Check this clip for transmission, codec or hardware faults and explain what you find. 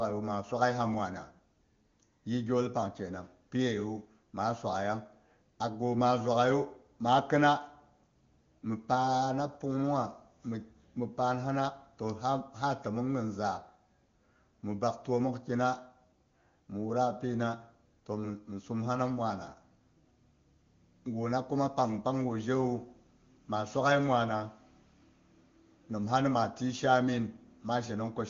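No transmission, codec or hardware faults turn up in this clip.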